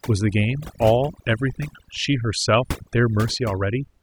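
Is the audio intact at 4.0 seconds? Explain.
No, not really. At 4.0 seconds you're still hearing the overdone noise removal that runs through the whole speech clip. The noise reducer was pushed too hard, so any frequency band sitting close to its noise estimate gets pulled way down or switched off, and the softer parts of the voice get caught too. So the background sits near silent with little twinkly specks.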